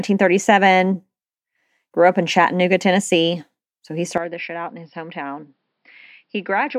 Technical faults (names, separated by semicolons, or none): input switched to a poorer device